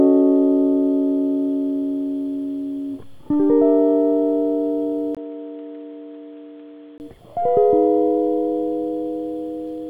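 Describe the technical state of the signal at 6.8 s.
Input switched to a poorer device, from 5.15 to 7.0 s, covers 6.8 s: the recording likely moved to a weaker input, so the music has nothing above 4.1 kHz, sounding dull and boxy, drops roughly 5 dB, and carries new noise, after a 20 ms gap at 5.15 s.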